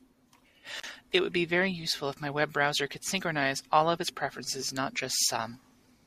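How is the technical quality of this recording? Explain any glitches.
The recording has two brief glitches in the speech.

At 0.78 to 0.86 s there is an intermittent contact: a loose cable or plug opens for about 36 ms, so the sound drops out with crackle at either edge.

At 4.31 s there is a corrupt FLAC frame: flipped bits sent the decoder's prediction astray until the next intact frame, producing a brief, quiet error peaking around -45 dBFS.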